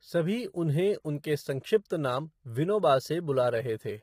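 From start to end, the signal has likely passed through low-delay AAC compression of the AAC-ELD kind used for video calls, at a bitrate that sounds consistent with about 24 kbps. Its low-delay window codes about 500 frequency lines a frame, and with so few bits the damage is heavy. The voice comes across rough and grainy, with noise filling the gaps between harmonics and a thin, artificial-sounding top band.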